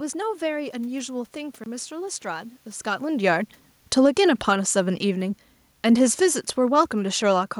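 At 1.64 s the program likely failed to deliver an output buffer in time, and a block of digital silence filled the gap until 1.66 s. The 23 ms hole fits a 1024-sample buffer. The speech drops to silence and returns with no fade, and it is heard as a brief gap.

From 3.05 s to 7.55 s the automatic gain control judges the input too loud or its background noise too strong and pulls its gain down gradually, by about 7 dB overall. This automatic gain falling is separate from the talker shifting position around 2.5 s. The voice and the room noise behind it sink together, so the background fades along with the speech rather than staying steady, and the clip ends noticeably quieter than it was just after 3 s.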